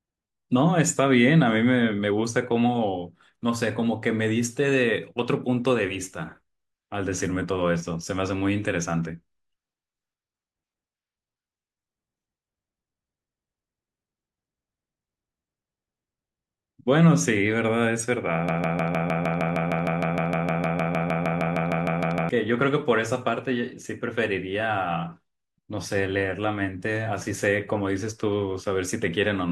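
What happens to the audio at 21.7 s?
At 21.7 s the speech is stuck in a broken-record loop: a 0.15 s fragment repeats 25 times from 18.49 to 22.29 s, likely a stalled player resending its last buffer.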